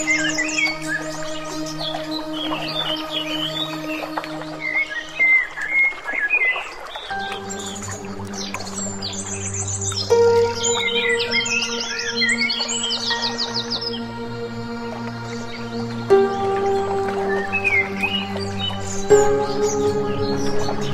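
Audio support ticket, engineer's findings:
Listened through the whole recording and found nothing to flag; no dropouts, glitches or artefacts that would point to a problem anywhere in the chain.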